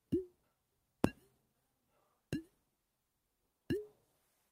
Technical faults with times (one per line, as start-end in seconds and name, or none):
0.43-0.54 skip ahead
1.38-1.82 jitter buffer speed-up